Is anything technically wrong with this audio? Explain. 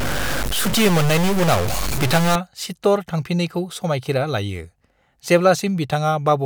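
Yes. From 0 to about 2.36 s the speech has harsh, buzzy distortion, and the pauses fill with noise. This is likely a stuck bit: one fixed data bit shifts about half the samples by a step of around -20 dBFS, flipping with the sign of small values. Unlike clipping, the noise persists when the signal is quiet.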